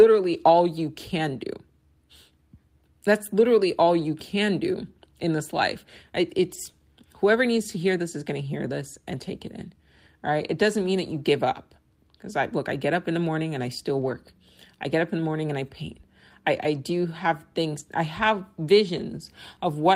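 At 0.33 s, 3.99 s, 6.49–6.55 s, 7.57 s, 13.97–14.11 s, 17.79–17.81 s and 18.97–18.99 s, there are lost packets rebuilt from error correction. Low-bitrate copies fill 20–80 ms without gaps. The waveform stays continuous, while the spectrogram shows brief grainy, noisier patches.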